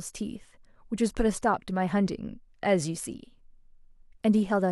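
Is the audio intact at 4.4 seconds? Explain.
Yes, at 4.4 seconds the speech plays through cleanly, with no dropout, click, distortion or other fault at that point.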